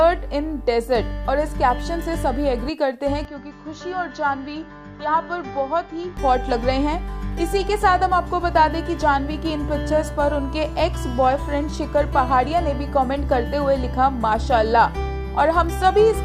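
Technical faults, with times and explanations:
3.25 to 6.17 s, input switched to a poorer device: with no gap at the change, the sound abruptly loses its top end and turns duller, drops a few decibels, and carries a faint new noise floor far below the signal, then clears again at 6.17 s. The likely cause is the recording moving briefly to a lesser microphone with a narrower band. A spectrogram shows energy cut off sharply near 7.1 kHz across that stretch, and the waveform envelope steps down and back up.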